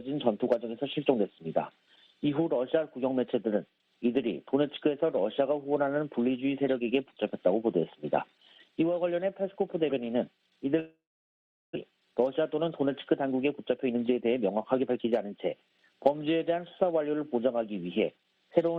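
From 10.79 to 11.77 s the sound fades into a brief buzz, then near-silence, and 600 ms never returns, likely a long network dropout. From 11.87 to 15.32 s a jitter buffer speed-up plays audio at 110% speed, same pitch, trimming roughly a third of a second of backlog.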